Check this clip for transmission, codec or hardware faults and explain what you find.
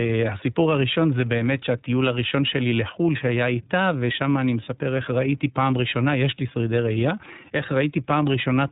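One fault runs through the whole speech clip: iLBC codec coding. For its full length the speech passed through this narrowband VoIP codec, with each frame's excitation coded on its own, a pattern that fits 30 ms frames and a rate near 13.33 kbps. Nothing above 3.8 kHz survives, and the codec damage is plainly audible as a rough, synthetic quality.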